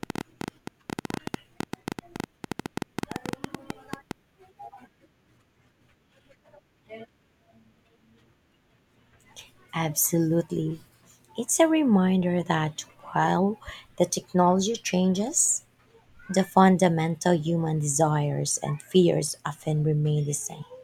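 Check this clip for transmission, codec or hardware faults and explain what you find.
There is one fault. A train of clicks runs from 0.03 to 4.12 s, likely from electrical interference or a faulty connection injecting pulses. It sounds like about 50 irregular ticks, roughly 11 per second, well above the speech.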